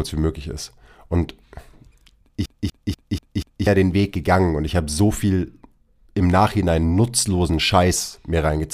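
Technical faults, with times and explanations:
2.46 to 3.67 s: CD stuck on one turn. A 0.24 s slice of the speech plays five times, with a brief mute at each jump, as a scratch throws the laser back one track every revolution. Its rigidly even rhythm sets it apart from irregular network or buffer stutter.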